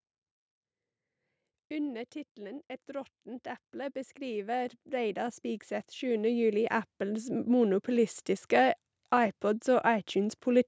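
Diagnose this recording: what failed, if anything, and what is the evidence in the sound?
The failure is in the call processing chain: automatic gain rising. From 2.35 s the level starts creeping up and keeps climbing until about 8.21 s, ending roughly 16 dB louder, with the speech and the background noise swelling together. That shared lift is the tell. The AGC decided the input was too quiet and slowly wound its gain up, so everything, not just the talker, gets pushed louder over those six seconds.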